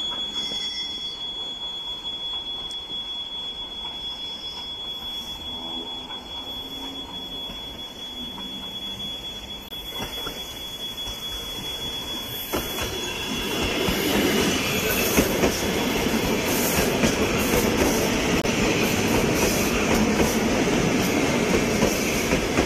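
At 3.24 s a corrupt frame was decoded: damaged bits were played as if valid, giving misplaced energy peaking around -25 dBFS for roughly one frame. At 9.69 to 9.74 s and 18.40 to 18.46 s, corrupt frames were muted. The decoder rejected damaged data and silence replaced it, leaving abrupt holes of about 55 ms that fit two frame lengths each.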